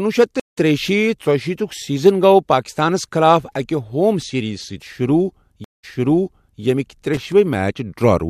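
At 0.40 s the stream connection drops, and the player goes silent for 162 ms before reconnecting and starting a fresh decoder. The speech picks up about 0.15 s further on, so a short slice is skipped. The second stream reconnect, spanning 5.64 to 6.62 s, leaves a 189 ms gap. This time the server resends a burst, so playback resumes 789 ms earlier and a stretch of speech is heard twice.

From 7.14 to 7.32 s, a worn or dirty contact makes and breaks the signal path in rapid succession. This loose connector crackle chops the audio into fragments, heard as a brief, irregular burst of scratchy crackle over the speech.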